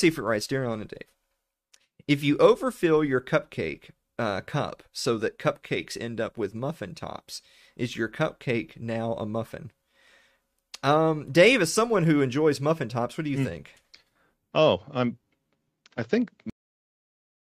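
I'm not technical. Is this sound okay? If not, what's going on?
No. The recording has a cut-off end: at 16.50 s the speech stops partway through a sound and drops straight to dead silence for the final second. The last stretch of audio was never saved, so the sentence is chopped off instead of finishing naturally.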